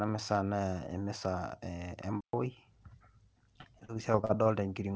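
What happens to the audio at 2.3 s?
Playback stall, 2.21–2.33 s: the speech drops into 126 ms of silence, likely from a starved or blocked player. The waveform flatlines, and the spectrogram shows a blank vertical gap.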